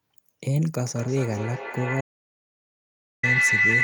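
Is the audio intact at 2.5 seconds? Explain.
No. From 0.85 s to the end, a microphone-to-loudspeaker loop gains level each pass, causing feedback howl: a tone around 2 kHz pulsing roughly every 200 ms, peaking about 5 dB above speech. From 2.01 to 3.23 s, the input was likely lost while writing continued, giving an audio dropout to silence: 1.22 s of total silence without room tone.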